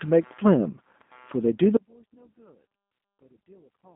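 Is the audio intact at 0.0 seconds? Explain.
No. Right from 0.0 seconds there's computer activity noise: load swings in the machine shift the audio's shared ground, leaving a faint buzz pulsing around 150 times a second, roughly 40 dB under the speech. The G.729 codec damage is also plainly audible from the start. The speech is rebuilt from a filter-and-pulse model, so it sounds rough and slightly synthetic, squeezed into a 200 Hz to 3.6 kHz line band with nothing above 3.7 kHz, which fits an 8 kbit/s G.729A stream.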